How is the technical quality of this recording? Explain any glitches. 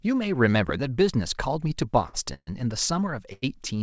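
The recording has three kinds of glitch: one loud pop, two brief stalls and one freeze. The speech itself has a band limit at 8 kHz with nothing above it, which fits a G.722 call codec running at 64 kbps.

Loud pop, 0.69 to 0.71 s: A sudden voltage step, likely from a switch, plug or static discharge, entered the signal chain. It is heard as a single sharp pop about 10 dB above the speech, with the speech continuing underneath.

Short stall from a late packet, 2.08 to 2.15 s and 3.33 to 3.44 s: A packet arrived late and the jitter buffer briefly ran dry, so the receiver stretched the last sound for 52 ms and then 92 ms. Nothing is lost, but the sound hangs unnaturally with a slight buzz or dip.

Call audio freeze, 2.34 to 2.49 s: A longer hold-up, likely from packets delayed in the network, emptied the jitter buffer. The receiver filled 131 ms, first by carrying the last sound as a fading buzz or hiss and then with about 50 ms of silence. 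The speech then resumes from the point where it stopped.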